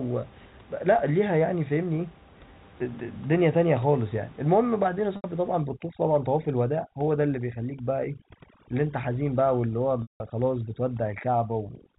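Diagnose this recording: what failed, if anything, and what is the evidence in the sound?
Packet loss with pitch repetition, at the network stage, occurs twice. At 5.16 s an 80 ms gap is bridged by a held, slightly buzzy repeat of the last pitch period, consistent with four 20 ms packets going missing. At 10.02 s a longer 180 ms gap stretches the repeated period past its roughly 50 ms fade, so it dies to silence before the speech cross-fades back in at about 10.20 s.

Overdone noise removal, at the call-processing stage, takes hold from 5.61 s to the end. The room noise, which sits about 24 dB under the speech, drops and breaks up into twinkling specks where individual frequency bands flick on and off. The suppressor treats quiet speech components as noise and gates them with the background through the final seconds of the telephone-band audio.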